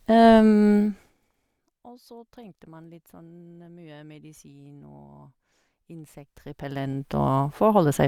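A fast ticking rasp rides on the speech from 0.76 to 1.3 s as the level drops about 25 dB. This is zipper noise: the gain falls in unsmoothed steps, roughly a hundred per second.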